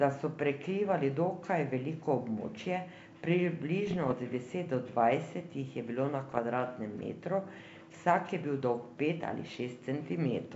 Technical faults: bit errors on an ADPCM link

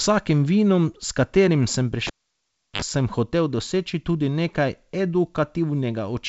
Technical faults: cable pulled and plugged in

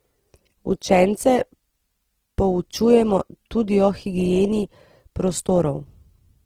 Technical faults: Opus compression

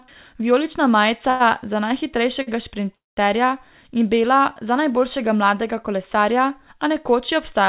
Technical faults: short stall from a late packet; call audio freeze

